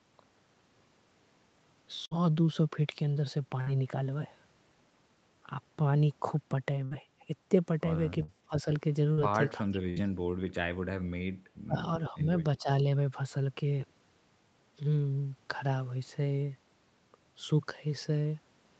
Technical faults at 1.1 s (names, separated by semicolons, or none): none